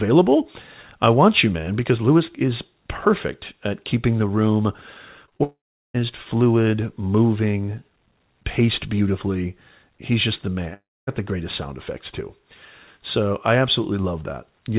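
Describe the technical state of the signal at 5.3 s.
Around 5.3 s there are three short concealed packet losses, at 5.26–5.29 s, 5.29–5.33 s and 5.37–5.41 s. Each gap fits one lost 20 ms packet. The decoder extended the preceding sound and blended back, leaving a brief smear and wobble within narrowband, 4 kHz-limited call audio.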